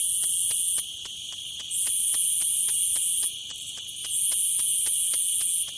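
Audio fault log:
No faults heard anywhere in this recording.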